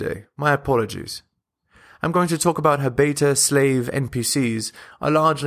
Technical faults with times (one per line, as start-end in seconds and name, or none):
none